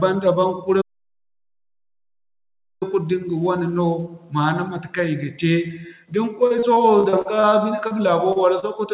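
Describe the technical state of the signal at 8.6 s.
At 8.60 to 8.66 s there is a short concealed packet loss: roughly 30 ms never arrived, and the decoder extended the preceding sound before blending back, leaving a brief smear.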